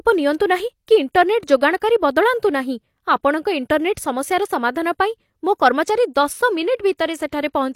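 At 6.97 s there is pre-echo. A brief hiss of about 17 ms leads into a sharp onset in the speech. The codec spread its quantisation noise across the whole block, so noise meant for the loud attack also fills the quiet gap before it. The onset sounds smeared.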